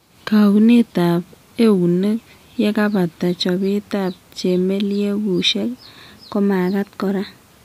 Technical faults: drift correction step

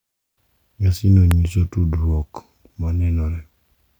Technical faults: electrical switching spike

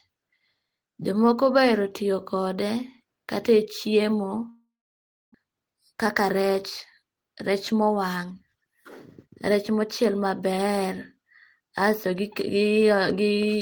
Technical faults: long network dropout; jitter buffer speed-up

